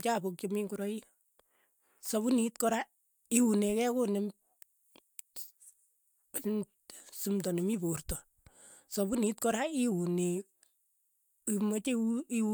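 No technical faults can be heard in this recording.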